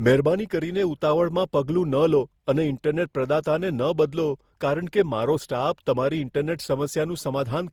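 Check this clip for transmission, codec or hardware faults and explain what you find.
One codec fault runs through the speech. Generation loss, throughout: the speech sounds swirly, smeared and hollow, with blurred attacks, likely from around ten successive lossy encodes, each requantising on a shifted frame grid so noise and spectral holes accumulate. The character fits Opus at about 64 kbit/s.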